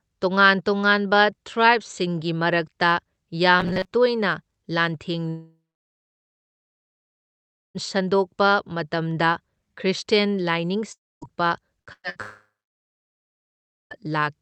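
At 3.60 to 3.92 s the speech turns into a rigid metallic buzz at 188 Hz, likely robotic sound from repeated short buffers, with a roughly 5 ms chunk looping over most of that stretch.

Long network dropouts hit at 5.29 to 7.78 s, 10.93 to 11.25 s and 12.22 to 13.94 s. Each time a brief fading tail gives way to silence, and the speech picks up later with the gap missing.

Between those last two, bursts of packet loss at 11.82, 11.93 to 12.07 and 12.10 to 12.19 s chop out 60 to 120 ms each, briefly held and faded before resuming.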